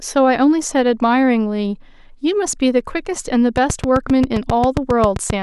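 From 3.57 s to 5.31 s, a train of clicks sits over the speech. The clicks arrive regularly, about 7.5 per second, roughly fifteen in all. Each one is well above the speech level. The likely cause is interference from nearby equipment.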